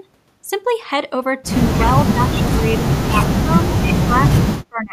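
The speech sinks by about 25 dB from 1.85 to 2.86 s, again at 3.05 to 3.15 s and 3.41 to 3.59 s, drops deepest, by about 35 dB, from 3.93 to 4.47 s, and fades once more from 4.69 s to the end. This is speech suppressed in double talk: with both ends likely talking at once, the echo canceller mistook this talker for loudspeaker echo and pulled the level down.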